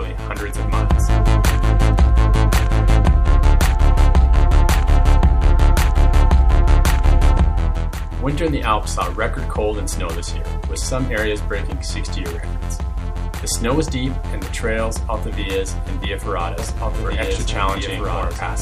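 From 16.59 s to the end, the audio has a doubled audio track: a second, full-band copy about 5 dB quieter trails by roughly a second and a half, likely from a slower duplicate capture path.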